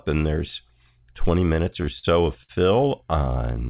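A speech recording carried over a call path, band-limited with nothing above 4 kHz, which fits G.711 mu-law at 64 kbps. From 1.54 to 2.05 s there are repeated stalls (stutter): five brief holds, the longest 44 ms and about 91 ms in total, where the last sound is stretched while late packets catch up. Nothing is skipped, which sets this apart from packet loss. The audio drags rather than jumps. From 2.43 to 2.51 s a short stall from a late packet holds one sound for about 57 ms, then resumes from the same point, a single isolated hold rather than a cluster.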